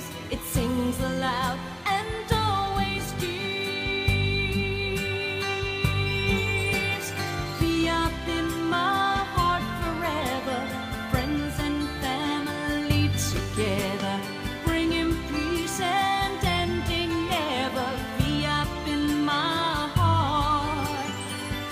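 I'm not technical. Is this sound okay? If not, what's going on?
Yes, it's fine: nothing jumps out as a problem anywhere in it, so there's nothing here you need to worry about.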